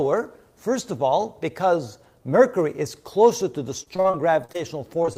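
From 3.83 to 4.56 s there's a run of repeated packet loss, and you can hear the robotic sound it causes. Eight separate holes open up, the longest about 37 ms, and the receiver keeps patching each one by stretching out whatever came just before. That filler makes up roughly a quarter of the stretch, so the sound turns choppy, with little pieces missing.

Right at the end there's short concealed packet loss three more times, starting at 5.02, 5.06 and 5.13 s, with the last one running into the end of the clip. Each time about 20 ms of audio never arrived, and the decoder bridged it by continuing the previous sound before blending back in. These come through as quick smears or wobbles clustered in the final few tenths of a second.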